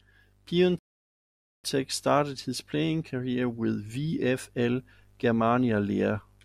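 A rebuffering stall runs from 0.79 to 1.64 s: the player exhausted its downloaded audio and halted until more data arrived. The speech drops to silence for about 0.85 s, then picks up exactly where it stopped with "started his playing career", losing nothing but adding time.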